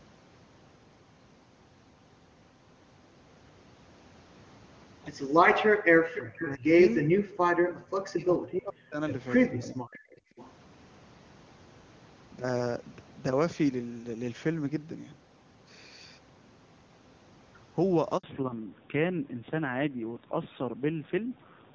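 A speech call recording in which the background is gated by the echo canceller at 5.7 to 6.05 s, dropping by about 40 dB, and again at 10.31 to 10.37 s, by about 17 dB, as the canceller clamps the microphone during loudspeaker playback. An echo leak follows: a delayed copy of the voice returns at 6.11 to 6.49 s (439 ms late, about 15 dB below the speech), 9.67 to 9.99 s and 10.37 to 10.51 s (545 ms late, about 25 and 30 dB down), likely residual loudspeaker pickup the canceller failed to remove. Speech is suppressed in double talk at 6.33 to 7.19 s, 7.5 to 9.0 s and 9.55 to 10.03 s, dipping by roughly 40 dB, likely because the canceller treated overlapping talk as echo. A 60 ms handover gap at 18.17 s silences the voice while the network link switches. From 18.23 s to the end there is a fallback to narrowband. Nothing above 4 kHz remains and the voice turns duller and rougher, consistent with a drop from HD Voice at around 23.85 kbit/s to AMR-NB at around 7.4 kbit/s.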